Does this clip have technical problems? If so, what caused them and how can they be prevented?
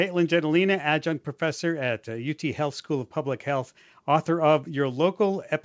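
No, no technical problems can be heard here.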